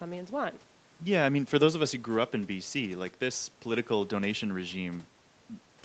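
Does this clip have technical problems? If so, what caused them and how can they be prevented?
No, nothing here counts as a technical problem: the speech has simply been through ordinary call processing and an Opus call codec, so the top end stops at around 8 kHz, which is just how this kind of call path normally sounds.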